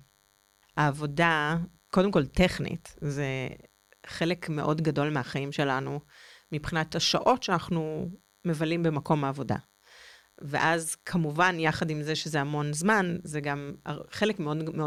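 A nearby DECT handset or base station is sending a radio burst every 10 ms, and the audio circuit is rectifying it into DECT cordless phone buzz: a thin, steady 100 Hz buzz rich in harmonics, running through the whole speech clip about 40 dB below the speech.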